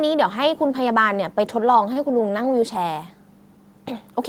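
At 1.93 to 1.99 s the speech hits a short stall from a late packet: the jitter buffer ran dry, so about 23 ms of the preceding sound was stretched, then playback resumed 23 ms later with nothing lost. On a spectrogram the harmonics run flat and smeared, with a small waveform dip.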